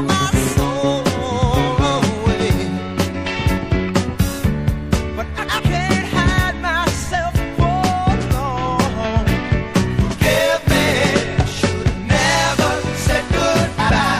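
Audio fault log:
throughout: MP3 compression, plainly audible, likely from encoding at a low bitrate around 64 kbps. The treble is cut off and weak frequency lines flicker between frames, giving a watery, swirly texture with metallic chirps on sibilant or bright sounds and smeared attacks.
5.38–5.60 s and 13.79–14.00 s: frames out of order. In each stretch two adjacent blocks of about 104.5 ms play swapped, which fits runs of four MP3 frames. Each stretch sounds like a brief garbled flutter, with no time lost.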